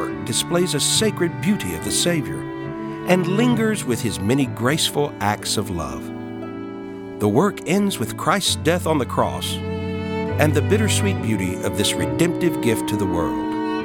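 No dropouts, distortion, timing errors or other technical faults can be heard anywhere in the audio.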